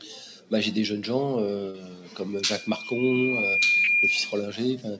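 At 1.70 s there's a short concealed packet loss: about 40 ms of audio never got to the decoder in time, so the receiver papered over the hole by carrying the previous sound forward and then blending back into the real signal at 1.76 s. You hear it as a quick smear or wobble rather than a clean dropout. The same thing happens again from 3.84 to 3.90 s, another 40 ms gap patched the same way.

Starting at 2.32 s, a loudspeaker feedback squeal creeps in. The mic is hearing the speaker it feeds, and at 2.4 kHz the loop gain climbs past one, so that tone keeps feeding itself. It swells over roughly a second and a half into a steady whistle sitting a few dB above the rest of the sound, and it hangs on until 4.56 s. Because the call path has nothing above 8 kHz, which fits a wideband codec like G.722, the squeal lands well inside the passband and comes through in full.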